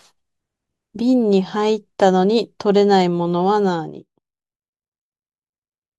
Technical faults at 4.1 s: zipper noise

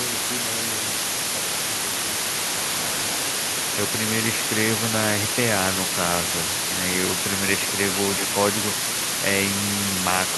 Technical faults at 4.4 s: low bit depth with dither

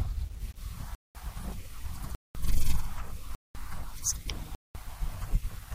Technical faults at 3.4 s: gap between chunks

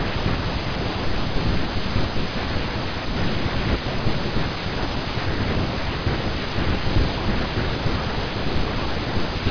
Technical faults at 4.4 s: none

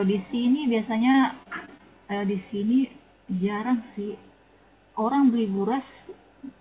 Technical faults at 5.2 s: none

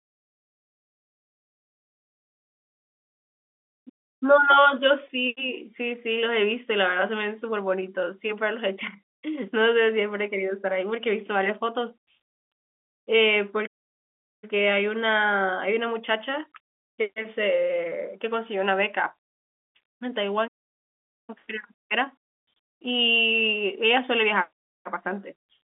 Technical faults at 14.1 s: playback stall

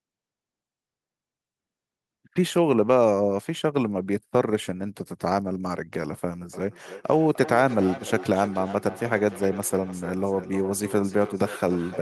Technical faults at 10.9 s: feedback echo between two devices

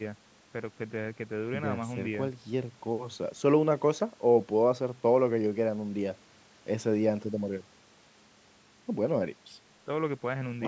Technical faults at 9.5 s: none

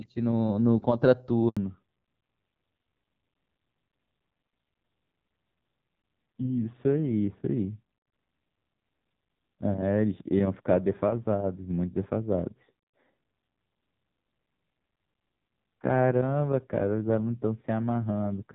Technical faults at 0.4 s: none

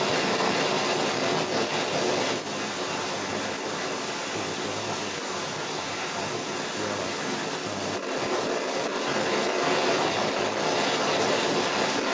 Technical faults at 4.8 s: other side's voice leaking through

